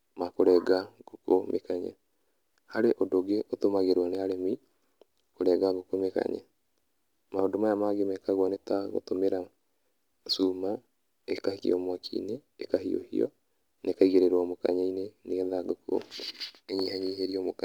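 Sample clock jitter runs through the whole speech: the converter clock wanders by around 3 microseconds, so steep waveform slopes get mis-timed. A faint hiss, roughly 40 dB below the signal, rides on loud and sibilant sounds, showing as high-frequency haze that vanishes in pauses on a spectrogram.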